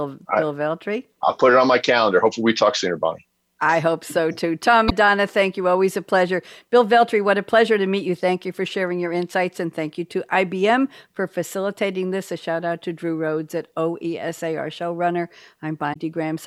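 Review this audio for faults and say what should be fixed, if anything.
At 4.87–4.92 s and 15.92–15.97 s the speech skips ahead through a brief glitch, likely a broken MP3 bit reservoir: a frame after a cut borrows another frame's bytes. Unlike a plain dropout, the audio jumps forward. Prevent it by cutting MP3 streams only with reservoir-aware tools, or by re-encoding from the original source.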